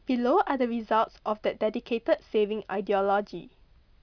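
No technical faults can be heard anywhere in the recording; the signal stays continuous and stable throughout.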